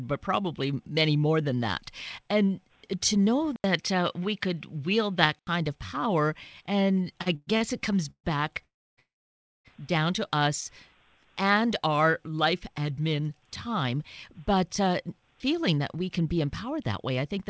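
Input switched to a poorer device, 3.56 to 5.47 s: the sound drops out for about 80 ms, then turns duller, with nothing above 7 kHz where the G.722 call path otherwise carries content up to 8 kHz. A faint new noise floor appears, far below the speech, while loudness stays the same. This is most likely the recording input changing to a narrower-band microphone or headset profile, then switching back at 5.47 s.

Short stall from a late packet, 7.22 to 7.28 s: one packet missed its playout time, so the receiver stretched the preceding sound by 40 ms until it arrived. Playback then resumed exactly where it left off. Nothing is lost, but that moment sounds slightly held, with a faint buzzy smear.

Call audio freeze, 7.36 to 7.49 s: this is likely a longer packet hold-up that emptied the jitter buffer. The receiver filled 110 ms by extending the last sound as a fading buzz, ending in about 20 ms of silence, then picked up from the same point.

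A second short stall from a late packet, 7.57 to 7.63 s, adds a 36 ms hold.

Further freezes follow at 8.11 to 8.26 s (132 ms filled, about 80 ms silent) and 8.64 to 8.99 s (337 ms, about 280 ms silent). The longest runs straight on from 8.99 to 9.67 s (652 ms, about 590 ms silent). In each, the buzz dies away into a gap before the audio resumes intact, so these stretches push the delay up in steps.

Jitter buffer speed-up, 14.40 to 17.45 s: with more audio queued than the buffer's target, the receiver cut many short pitch-period slices to work the backlog down, taking out roughly a third of a second. The speech runs at about 110% speed with its pitch unchanged, so this final stretch sounds noticeably hurried.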